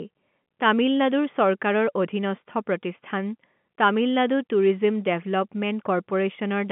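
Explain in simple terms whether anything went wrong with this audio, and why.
Nothing went wrong with this audio; it simply has the narrow sound of an ordinary landline call, which is normal for the telephone line it came through.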